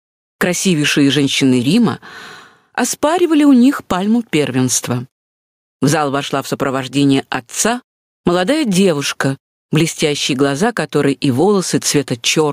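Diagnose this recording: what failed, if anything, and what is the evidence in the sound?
Gain pumping runs through the whole clip: the gain is pulled down on each loud sound, swinging by about 15 dB. The likely cause is gain set far too high, with a fast limiter clamping each peak. The waveform looks flattened.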